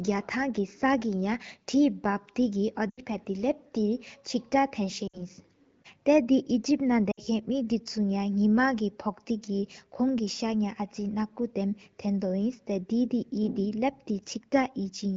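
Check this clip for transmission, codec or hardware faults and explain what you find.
There's one transmission fault here: three bursts of lost AMR speech frames, at 2.90 to 3.01 s, 5.07 to 5.21 s and 7.11 to 7.20 s. Each time, corrupted frames failed their check and the decoder patched the gap by repeating the last good pitch and vocal tract settings while ramping the gain down. The first gap, about 80 ms, fits four 20 ms frames, and the other two, about 60 ms each, fit three. Because this is wideband, the concealed sound drops to near silence within two frames before the speech returns a bit weak and rough. The AMR wideband (HD Voice) codec sounds clear and only lightly coloured, which fits a rate of about 12.65 kbit/s.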